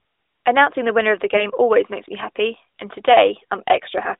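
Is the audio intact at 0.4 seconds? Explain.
Yes, the audio is intact at 0.4 seconds, with only the narrow 300 Hz to 3.7 kHz band of the AMR narrowband mobile codec that runs through the whole clip.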